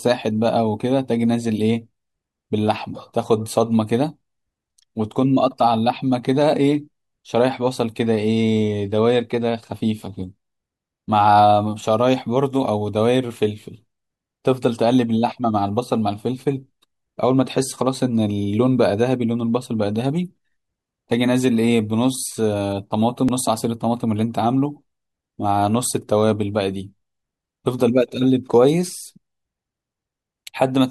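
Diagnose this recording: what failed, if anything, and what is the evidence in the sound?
At 23.3 s the speech jumps forward with no gap: a very short slice, around 10 ms, is missing. The likely cause is a dropped buffer (overrun) in the driver or buffer stage, where unread samples were overwritten and the surrounding audio was spliced together.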